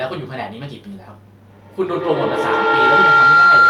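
Feedback howl begins at 1.49 s and runs to the end: a tone near 1.5 kHz climbs to about 11 dB above the speech, with the loop repeating roughly every tenth of a second, as the microphone-to-loudspeaker loop amplifies each pass instead of letting repeats decay.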